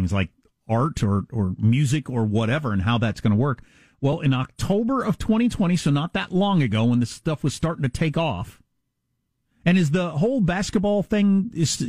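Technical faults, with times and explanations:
4.13 s, repeated buffer: Right after "that's going to work" there is a single tiny click, too brief to register as a stutter. The playback device did not get fresh audio in time and played its last block once more, a piece only 1.45 ms long, which fits a 64-sample buffer. The hard joins at each end of the duplicated sliver make the click, and since the repeat only delays the following audio, essentially none of the speech is lost.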